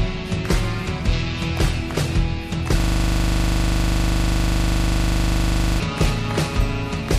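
A system hang loop runs from 2.8 s to 5.8 s. The computer or its audio driver stopped supplying new data while the sound hardware kept replaying the last chunk in its ring buffer, so a 40 ms slice repeats back to back about 75 times. At a loop rate of 25 Hz this comes across as a rapid, mechanical stutter bordering on a buzz, and roughly three seconds of the real audio never reach the output.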